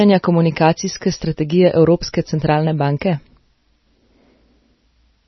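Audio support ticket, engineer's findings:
Speech band-limited, nothing above 5.9 kHz throughout; watery, swirling texture and smeared attacks, likely MP3 compression at a low bitrate near 24 kbps. Fixed treble cut plus frame-to-frame swirl distinguishes it from plain low-pass filtering.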